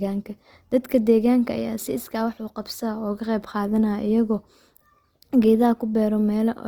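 A speech recording with plainly audible codec damage from start to finish. The top of the spectrum stays open, reaching up to about 20.4 kHz, so nothing sounds muffled. The harm is in the texture. Voiced sounds come out rough and grainy, with a noisy fizz on steady tones. There is little of the watery swirl that MP3 gives. The cause is likely Opus compression in its music mode, at a rate that fits roughly 24 kbps.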